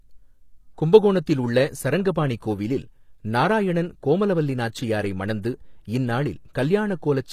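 From start to finish the speech carries plainly audible HE-AAC compression damage, likely from encoding at a low bitrate, around 24 kbps. The lower spectrum is coded directly, while the treble is rebuilt by copying lower bands upward, so its harmonics fail to line up above the crossover. Sibilants sound gritty and metallic, and lispy. A spectrogram shows a smeared, repeated-looking upper band with blocky envelope steps above a visible seam.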